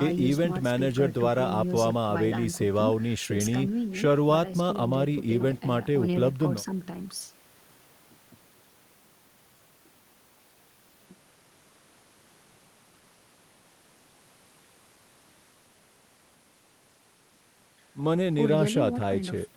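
No technical faults can be heard in this recording.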